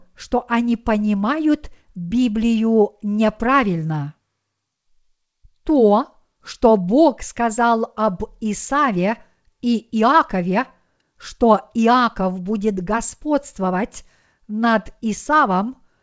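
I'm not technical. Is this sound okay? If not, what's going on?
Yes, nothing has gone wrong in this speech recording. It has passed through an ordinary internet call connection, which keeps everything up to about 8 kHz, so it sounds like a normal call and lacks the very highest, airiest sounds.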